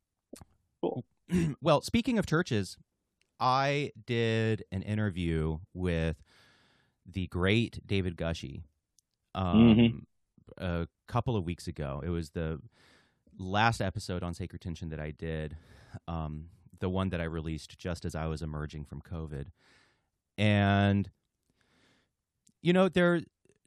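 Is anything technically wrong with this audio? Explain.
No technical faults are audible.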